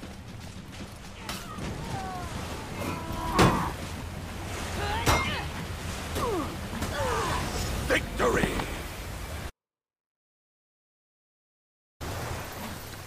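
Dropped buffers (overrun) at 3.16, 4.76, 5.6, 6.6 and 12.52 s: each is a sudden jump forward in the sound, no gap of silence, most likely because the capture side failed to collect its samples before the hardware overwrote them. The missing stretch is spliced straight across, losing around 40 ms at 4.76 and 12.52 s, roughly 70 ms at 3.16 and 5.6 s, and about a tenth of a second at 6.6 s, the longest skip.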